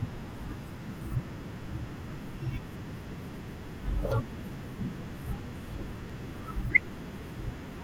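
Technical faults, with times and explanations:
2.13–7.08 s, periodic USB or driver dropouts: roughly every 0.99 s the speech jumps forward as around 10 ms of audio is skipped, about seven times. A recurring background task stalling the USB bus or audio driver leaves regular ticks wherever speech is present.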